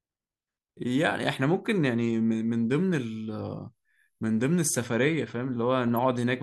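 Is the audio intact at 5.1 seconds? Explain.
Yes, at 5.1 seconds the speech plays through cleanly, with no dropout, click, distortion or other fault at that moment.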